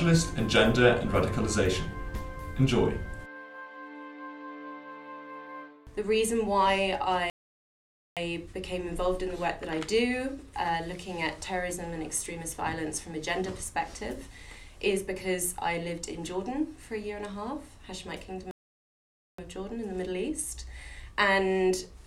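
Playback stall at 7.30 s and again at 18.51 s: the sound cuts out mid-flow into silence for about 0.87 s each time, ending at 8.17 s and 19.38 s. The player likely ran short of data or had its output thread blocked, so nothing reached the output until it recovered.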